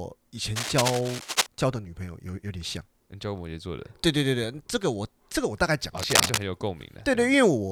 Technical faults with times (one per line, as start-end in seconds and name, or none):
0.56-1.46 cable scratch noise
5.98-6.38 cable scratch noise